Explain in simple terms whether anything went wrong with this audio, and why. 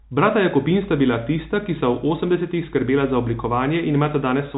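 Nothing went wrong here.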